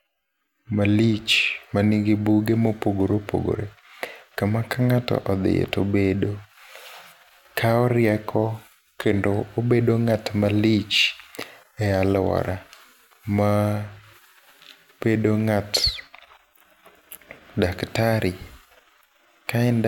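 Nothing stood out on listening to this speech recording.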